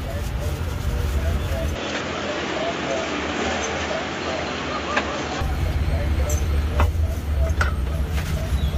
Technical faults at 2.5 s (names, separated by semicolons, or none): input switched to a poorer device